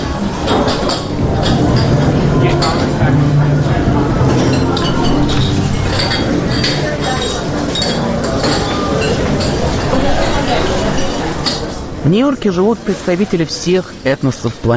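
No technical faults can be heard anywhere in the recording.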